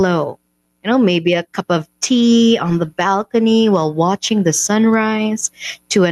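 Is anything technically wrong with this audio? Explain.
Yes, there is gain pumping throughout the speech. The level swings by around 10 dB, so loud and soft passages sit unnaturally close and the whole thing sounds squashed. The likely cause is input gain set far too high, with a fast limiter or compressor clamping down on each peak.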